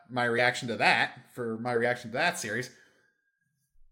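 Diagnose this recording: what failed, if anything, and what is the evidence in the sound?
At 0.37 s the speech lurches forward, just before "to that for my", with a short smeared blip at the join instead of a sharp click. This is compressed frames skipped, at the codec or storage stage. Roughly 50 ms of audio is simply absent, which fits two whole frames of a codec working in 24 ms frames. They were either missing from the stream or rejected by the decoder as damaged. Because adjacent frames overlap, the decoder blends across the gap, which softens the seam into that brief smear.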